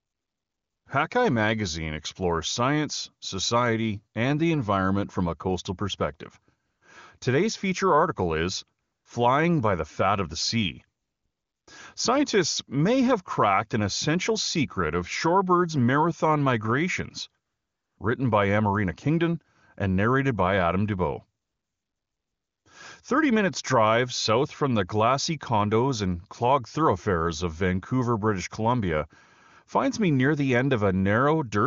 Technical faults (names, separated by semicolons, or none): AMR comfort noise